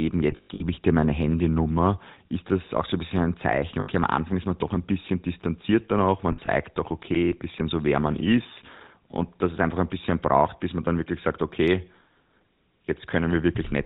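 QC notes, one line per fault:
Throughout, GSM full-rate codec: plainly audible damage across the whole speech clip. The codec rebuilds each voice from a vocal-tract model excited by regular pulses, keeping only every third excitation sample, so the voice takes on a buzzy, gravelly roughness. Nothing above 4 kHz survives, leaving the sound dull and boxy. The bitrate of 13 kbps fits the original full-rate GSM coder.
0.32 to 0.62 s, lost GSM frames: about 200 ms of frames missing, scattered over 280 ms, the longest run roughly a tenth of a second. Each gap is filled by repeating the last good frame's settings, so the voice smears into a rough, metallic ring instead of dropping out cleanly.
3.80 to 3.88 s, lost GSM frames: an 80 ms gap, filled the same way, heard as a short metallic hold on the sound.
6.32 to 6.49 s, lost GSM frames: 80 ms lost, spread over 160 ms, the longest run around 70 ms, giving a brief ringing, frozen quality.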